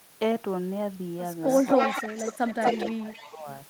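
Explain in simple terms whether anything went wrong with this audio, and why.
Something did go wrong, most likely in the echo canceller on the far end of the call, where the sound was playing through a loudspeaker. It failed to strip out what its microphone picked back up, so an echo leak sent that sound back. From 1.49 to 2.91 s you hear a second copy trailing about a quarter of a second (240 ms) behind, nearly as loud as the original. A fainter repeat returns from 3.09 to 3.3 s.

The same canceller likely caused the second problem, speech suppressed in double talk. While both sides were making sound at once, it could not tell the local talker from the returning echo, so it turned everything down together. Between 1.74 and 3.47 s the sound dips and fades in patches, sometimes sharply, for about a second and a half in total, before recovering near the end.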